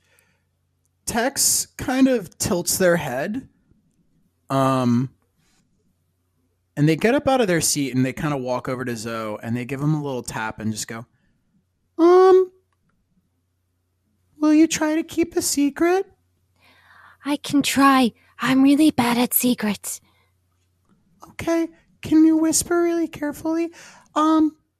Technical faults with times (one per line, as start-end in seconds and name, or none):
1.46 DAB burbling
19.75-19.92 DAB burbling